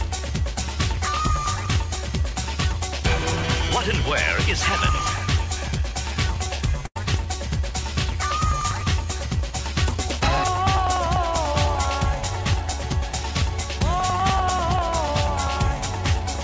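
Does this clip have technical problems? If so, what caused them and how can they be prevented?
Yes, two things stand out. The first is periodic USB or driver dropouts running from about 0.09 s right through to the end, one roughly every 0.098 s, so about ten a second. Each time, a background task stalls the USB bus or the audio driver and a tiny slice of audio is simply skipped rather than filled, which gives a steady ticking that rides on the sound whenever there's signal. To prevent it, track down whatever is hogging the bus or driver on that cycle (power management, polling utilities, a busy hub) and give the interface a dedicated port and a larger buffer.

The second is a burst of packet loss from 6.86 s to 6.97 s. About 100 ms of audio never arrived in time, so the receiver stretched out the last bit of sound for roughly 95 ms, letting it fade, and then jumped ahead, leaving that stretch missing. 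The call path itself comes across as a G.722-style link with nothing above 8 kHz. To prevent the gap, get the call onto a steadier network, ideally wired rather than Wi-Fi, and enable forward error correction or a deeper jitter buffer if the setup allows it.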